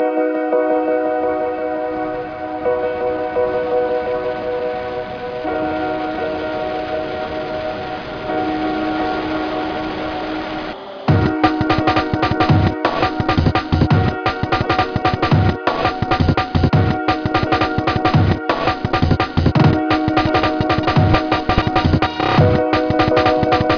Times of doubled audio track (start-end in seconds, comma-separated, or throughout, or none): none